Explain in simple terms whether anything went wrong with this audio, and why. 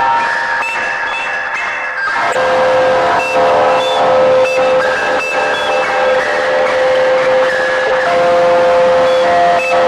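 Three short glitches pop out of the music, at 2.32–2.36 s, 4.57–4.60 s and 7.87–7.90 s. Each is a corrupt frame decoded: a tiny chunk of compressed data got scrambled, the player used it anyway, and out came a brief chirpy burst of noise.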